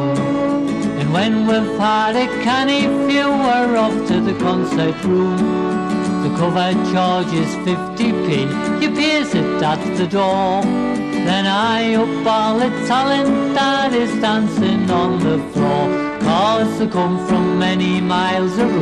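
No technical faults can be heard anywhere in the audio.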